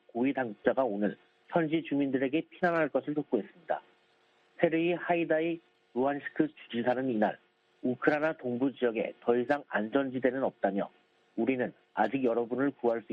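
No technical faults are audible.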